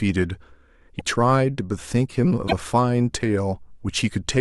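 At 0.98 to 1.01 s and again at 2.47 to 2.53 s the speech skips ahead with a brief garbled glitch, roughly one and two 26 ms frames long. That's likely a broken MP3 bit reservoir: frames went missing, and the next ones decoded from the wrong borrowed data.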